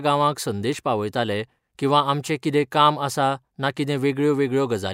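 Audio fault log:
Nothing to log here, since no faults turn up anywhere in this bit of speech.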